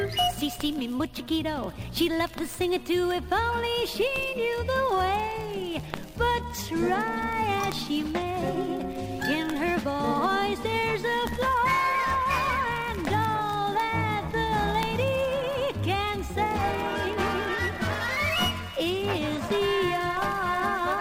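The signal holds steady throughout, with nothing in it pointing to a technical problem at any moment.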